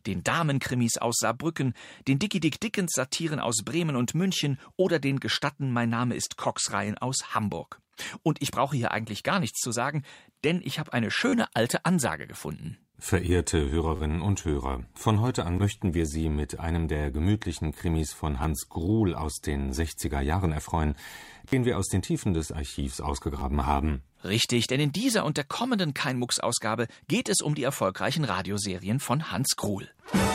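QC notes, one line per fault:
11.29–11.33 s, 13.96–14.00 s, 15.57 s, 18.43 s, 21.48–21.53 s, 23.39–23.41 s: repeated buffer. At each point the output runs dry and the same block of about 10.7 ms, which fits a 512-sample buffer, is replayed one to four times. Each repeat has a hard join. The longer runs at 11.29 s and 21.48 s are heard as a brief buzz, and the single repeats at 15.57 s and 18.43 s as clicks. Up to about 40 ms of audio is lost at each event.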